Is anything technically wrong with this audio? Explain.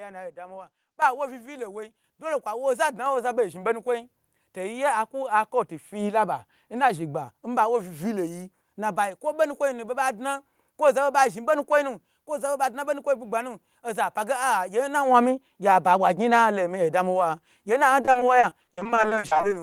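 Yes, two faults are audible.

At 1.02 s, between "alo adamiwa" and "wu vilo", the microphone volume stepped up: the call software judged the input too quiet and raised the device gain in a single jump of about 10 dB. The voice and background both suddenly become louder together.

From 18.01 to 19.45 s there is repeated packet loss, heard as robotic sound. Audio data kept arriving late or not at all, and each hole was patched by extending the preceding sound. The holes are each at most 40 ms but follow one another closely, totalling about 0.54 s, or 38% of that stretch, so the speech turns choppy with fragments missing.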